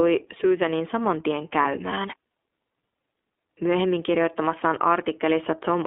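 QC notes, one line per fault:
Throughout: iLBC codec. The speech passes through a narrowband line from about 250 Hz to 3.6 kHz, and the coding damage is plainly audible as a rough, slightly synthetic edge on every syllable. Each 30 ms frame's excitation is coded independently, and the 13.33 kbps rate fits iLBC's 30 ms mode. On a spectrogram, energy stops flat at 3.6 kHz with nothing under 250 Hz. Harmonics look grainy, with faint frame-rate texture.
1.62 to 1.65 s: lost iLBC frames. Just after "saman tien", a 30 ms gap, one frame's worth, is filled by the decoder repeating the last pitch cycle mixed with noise. It is heard as a brief held, buzzy vowel sound instead of the real transition. The waveform shows repeated periodic cycles carried across the gap, and the spectrogram shows harmonics frozen flat for that span. Because iLBC frames stand alone, the next frame decodes cleanly and the sound recovers at once.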